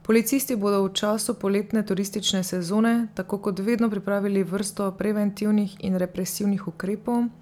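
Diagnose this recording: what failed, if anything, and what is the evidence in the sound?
Nothing in the chain failed: at no stage from capture through conversion, processing and storage to playback does the speech signal show an audible defect, so there is no fault to diagnose.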